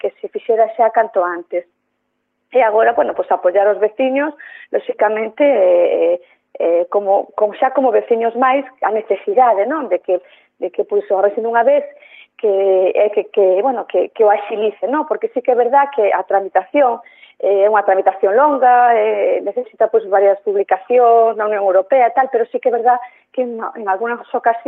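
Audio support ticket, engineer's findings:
Nothing stood out on listening; the audio sounds as expected for a call path with a high end topping out around 12 kHz.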